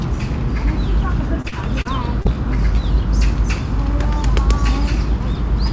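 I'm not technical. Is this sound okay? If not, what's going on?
No. Repeated packet loss (robotic sound) from 1.42 to 2.35 s: five brief dropouts get patched by repeating the preceding sound, giving a choppy texture with pieces missing.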